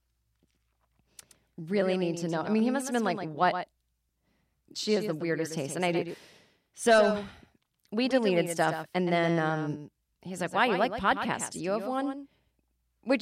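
From the first syllable to the end, every phrase of the speech is shadowed by a fainter, identical repeat trailing about a tenth of a second behind, roughly 10 dB down. The echo is crisp and full-band, with no reverberant tail or room colour, so it sounds pasted on rather than reflected. This is a doubled audio track: the same signal was likely captured twice, once through a slower path, and both copies were mixed together out of step.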